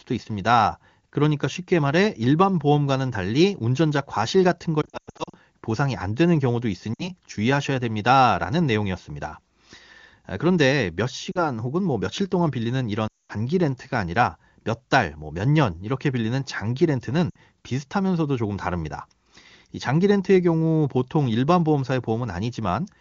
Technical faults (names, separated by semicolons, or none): lost AMR speech frames